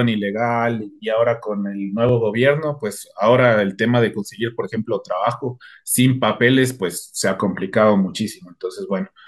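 At 2.09 s the speech drops to a block of digital silence lasting about 1.5 ms, a gap that fits a 64-sample buffer the program failed to fill in time. Because the sound cuts hard to silence and back with no fade, both edges land so close together that they merge into a single sharp tick rather than an audible hole. The silent gap between two abrupt edges is what separates it from a lone pop or a brief level dip.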